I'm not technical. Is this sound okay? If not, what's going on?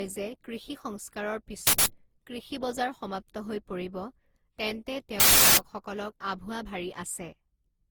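No. The speech has two problems.

Throughout the clip the speech sounds swirly, smeared and hollow, and the starts of syllables come out blurred rather than crisp. That is generation loss. The likely cause is that the recording was compressed with the Opus codec and then decompressed and compressed again, around ten times over. Each pass throws away a little more detail in slightly different places, so the damage piles up into this washed-out, watery quality.

There are also two sudden bursts of loud digital noise, which are uninitialised buffer faults. The first runs from 1.67 to 1.86 s, right after "কৃষি সংস্কাৰৰ" and just before "কৃষি বজাৰ সমাপ্ত হৈ". The second runs from 5.20 to 5.57 s. The playback system sent out chunks of memory before any real audio had been written into them, so it played leftover junk data as sound. The lengths, about 0.19 s and 0.37 s, fit blocks of 8192 and 16384 samples.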